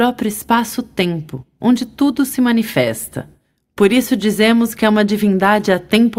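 No technical fault can be heard in the audio, with level, timing and continuity holding steady throughout.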